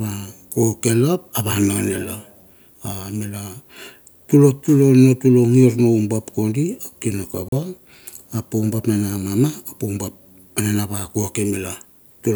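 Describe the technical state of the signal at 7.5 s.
At 7.48 to 7.52 s the speech drops abruptly to silence for about 37 ms: a Bluetooth dropout, likely from packets arriving too late at the headphones and being discarded, which fits two lost packets. Unlike a buffer stall, nothing pauses: the sound resumes further on, as if it had kept playing.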